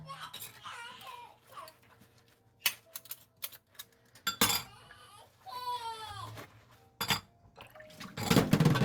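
Nothing is technically wrong with this recording of sounds.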